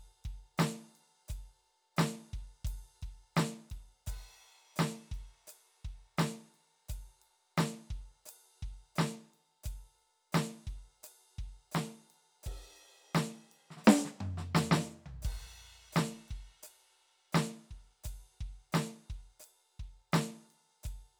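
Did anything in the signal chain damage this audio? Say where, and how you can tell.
No, nothing along the way has left a mark on this music that I can hear, so there's no stage to point a finger at.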